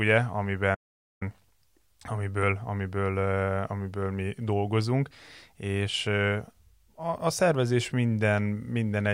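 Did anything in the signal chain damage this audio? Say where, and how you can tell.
Yes. The speech cuts out abruptly at 0.74 s and stays silent for roughly half a second, resuming at 1.23 s. That mid-flow dropout points to the playback stage: a playback stall, likely the player starving for data or its thread being blocked.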